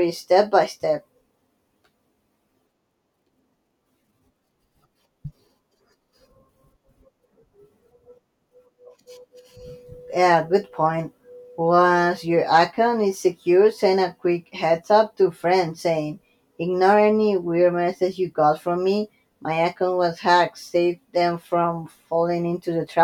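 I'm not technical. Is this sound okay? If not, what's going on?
Yes, nothing stood out as wrong when listening to this recording.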